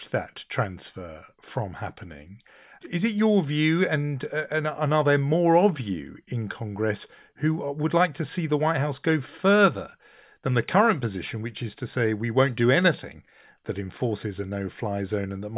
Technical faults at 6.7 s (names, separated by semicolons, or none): none